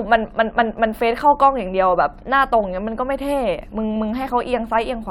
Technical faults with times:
none

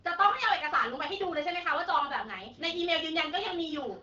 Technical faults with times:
none

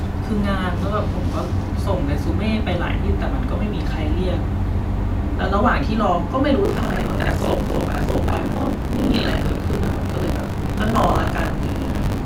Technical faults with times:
6.64-12.25 buffer tearing

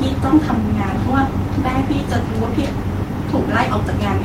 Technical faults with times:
none

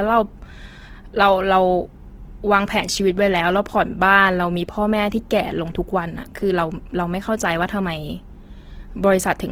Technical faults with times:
0.00-9.52 Opus compression

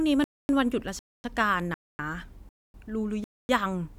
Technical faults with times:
0.24-0.49 gap between chunks
0.99-1.24 gap between chunks
1.74-1.99 gap between chunks
2.49-2.74 gap between chunks
3.24-3.49 gap between chunks

